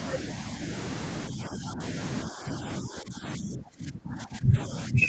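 Speech suppressed in double talk, at 1.29 to 1.8 s, 2.29 to 2.62 s and from 2.8 s to the end: the voice dips about 10 dB, then about 20 dB, likely because an echo canceller could not separate the talker from the overlapping loudspeaker echo and turned both down.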